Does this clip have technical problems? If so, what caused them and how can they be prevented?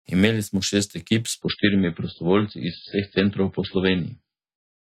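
Yes. At 1.42 s an adaptive stream switched to a lower bitrate, likely because the connection slowed, and stayed there to the end of the clip. The player swapped to a far leaner encoding without any gap, so the speech abruptly loses everything above 5 kHz and takes on a thin, swirly codec texture, which fits a drop from MP3 at 128 to 16 kbit/s. Preventing it means providing steadier bandwidth or setting a higher minimum bitrate in the stream's ladder.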